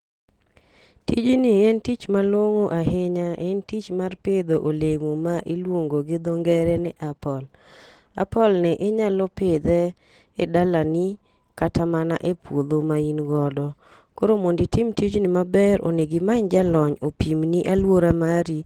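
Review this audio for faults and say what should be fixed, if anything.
Opus voice compression runs throughout the speech. The coder splits the band, with linear prediction below 8 kHz and a transform layer above it, and codes the excitation coarsely, leaving a hoarse, slightly robotic texture that fits a bitrate around 16 kbps. To prevent it, encode at a higher bitrate or keep an uncompressed master.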